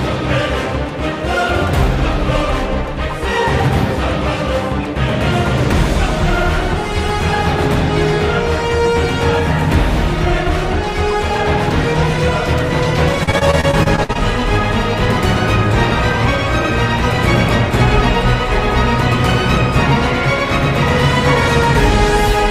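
From 13.23 s to 14.17 s the sound breaks up into repeated packet loss with a robotic quality. Around ten short holes, the longest about 53 ms, are patched by stretching the preceding sound, and these patches cover roughly a quarter of the stretch. The result is choppy, with pieces missing. On a spectrogram the band shows smeared, frozen slices and abrupt vertical seams, while the waveform shows repeated, near-identical cycles between jagged joins.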